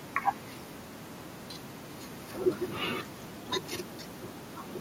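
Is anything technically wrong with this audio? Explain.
Yes. At about 3.53 s a loud pop breaks into the speech, lasting until around 3.69 s. A sudden voltage step or pulse, likely from a plug, switch, static discharge or driver glitch, was added to the signal, and the downstream circuitry shaped that pulse into a brief transient. It comes through as two sharp pops in quick succession, peaking roughly 10 dB above the speech, which continues uninterrupted underneath.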